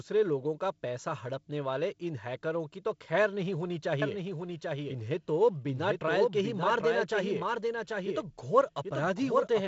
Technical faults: doubled audio track

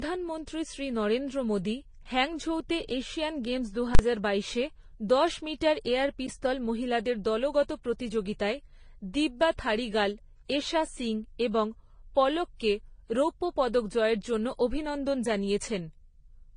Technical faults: transcoding between lossy codecs; invalid numbers at full scale

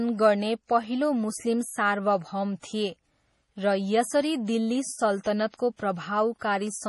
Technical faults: MP3 compression

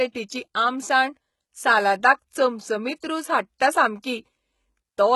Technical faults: HE-AAC compression; pre-echo

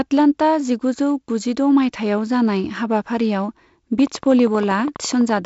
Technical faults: train of clicks

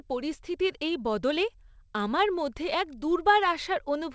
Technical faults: none

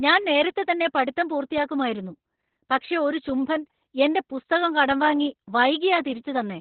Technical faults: Opus voice compression; DC step

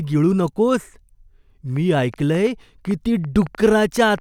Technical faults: train of clicks

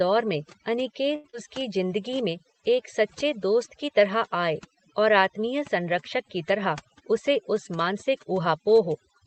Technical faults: overdone noise removal; short stall from a late packet; short concealed packet loss; jitter buffer speed-up

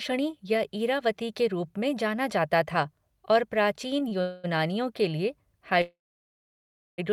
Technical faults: short stall from a late packet; call audio freeze

